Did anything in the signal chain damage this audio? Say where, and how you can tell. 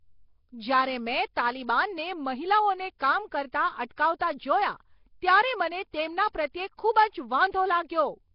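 Yes, the codec stage took a real beating here, and it runs the whole length of the speech. There's a rough, hissy halo around everything and a smeared, underwater feel, with nothing at all above about 5.3 kHz. That points to Nellymoser compression, likely from Flash's old Nellymoser Asao microphone codec at something near 22 kbps. It spreads a tiny, fixed bit budget across short blocks, drops weak bands entirely and fills them with noise, which gives you that hiss.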